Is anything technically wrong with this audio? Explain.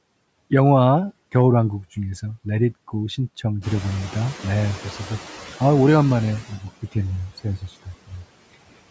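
Yes. There are three kinds of noise suppressor fault in this speech.

Noise suppressor artifacts run throughout. The suppressor pulls steady background noise down by about 21 dB, frame by frame. The noise sinks between phrases and rises under the speech.

The noise suppressor is catching up from 3.61 to 5.18 s. The room noise jumps by about 14 dB near 3.5 s. The suppressor's noise estimate lags, so at first it cuts only about 7 dB. The noise then sinks over roughly 1.57 s as the estimate adapts.

Speech is cut by the noise suppressor from 6.49 to 6.96 s and from 7.29 to 8.25 s. The suppressor treats parts of the speech as noise. It drops them by about 21 dB and about 20 dB. Roughly a fifth and then two-fifths of a second of speech sound swallowed or faint.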